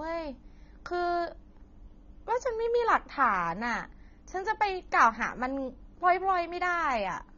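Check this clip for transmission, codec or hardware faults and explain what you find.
One fault runs through the whole recording: AAC compression damage, plainly audible from start to finish. The speech sounds dull and smeared. Sibilants and held sounds take on a warbling, fizzy texture. The likely cause is AAC-LC coding at a low rate, which fits a bitrate around 24 kbps. At that rate the encoder has too few bits for each frame of frequency lines. Coarse quantisation blurs fine detail. Nothing is heard above 21.1 kHz.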